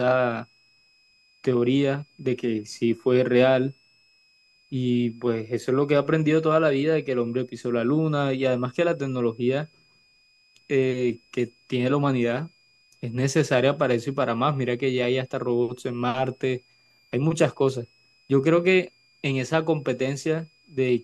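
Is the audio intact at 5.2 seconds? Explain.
No. A switching supply whistle runs through the whole clip, so it is present at 5.2 seconds too. A switching power supply nearby is cycling in an audible burst mode or beating with another one, and its switching frequency leaks into the signal. Under the speech you hear a thin, high whistle, wandering between about 2.4 and 2.7 kHz. It is faint, sitting very roughly 40 dB below the speech.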